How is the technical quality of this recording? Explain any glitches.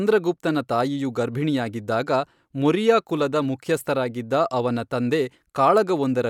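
The recording has no audible technical glitches, and the signal stays continuous and intact throughout.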